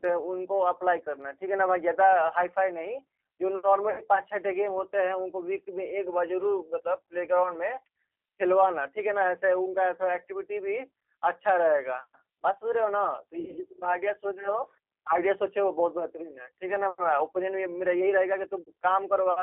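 Throughout, G.729 codec coding confines the speech to 300 Hz–3.4 kHz with rough, synthetic texture, consistent with 8 kbit/s; spectrograms show nothing above 3.4 kHz. VoIP packet loss concealed by the speech codec occurs at 3.90–4.03 s, 13.40–13.59 s and 18.61–18.70 s. The decoder stretches the last sound into a fading buzzy tone or coloured noise, appearing as smeared, repeated patterns with a shrinking waveform envelope.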